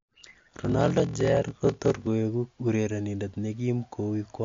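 A steady buzz at about 43.1 Hz runs under the speech from 0.0 to 2.07 s, and that stretch drags at 0.861 times normal speed while keeping roughly its normal pitch. This is a block size mismatch (padded): one stage hands over shorter blocks than the next stage reads, and the shortfall in each block is filled with silence. The buzz rate fits a reader taking 1024-sample blocks, with each padded gap repeating once per block. Across the whole clip the speech sounds watery and swirly, with smeared consonant attacks, metallic edges on sibilants, and nothing above 7.2 kHz. The likely cause is MP3 compression at a low bitrate, around 53 kbps. With bits scarce, the encoder cuts the treble at a fixed frequency and drops weak spectral detail that flickers in and out from frame to frame, which produces the swirl and the dull top end.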